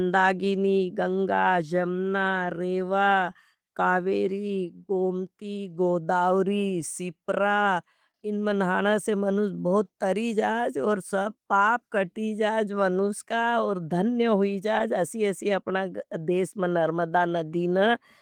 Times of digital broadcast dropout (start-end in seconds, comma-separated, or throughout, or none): none